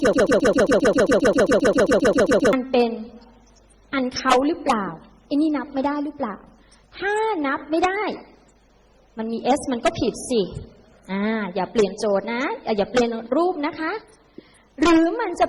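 Right from the start, and already going when the clip opens, there's a broken-record loop running until about 2.53 s: a 133 ms fragment repeats exactly, back to back, around 18 times. Most likely the player or stream stalled and kept resending its last piece, so whatever belonged there is gone.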